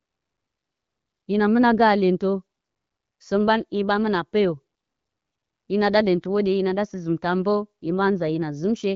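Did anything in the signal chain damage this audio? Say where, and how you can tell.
No, nothing in the chain damaged this speech: it has come through an AMR wideband (HD Voice) codec at 12.65 kbit/s, a rate at which that codec keeps speech clear, and nothing beyond its light coding character can be heard.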